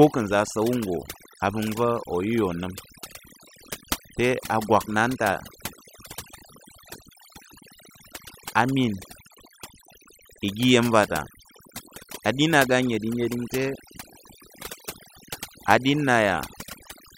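Overdone noise removal runs through the whole speech recording. A noise reducer set too aggressively has gated individual frequency bands down whenever they sat near its noise estimate. The background falls to near silence sprinkled with twinkling specks. A spectrogram shows isolated blips scattered through otherwise empty gaps, and the voice's quieter harmonics look fragmented.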